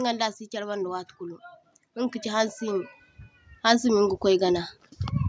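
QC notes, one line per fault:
1.93–2.97 s and 3.63–4.72 s, automatic gain rising: voice and background swell together by about 4 dB, then about 5 dB, after "see charbanda watukulu", as gain control lifts quiet input.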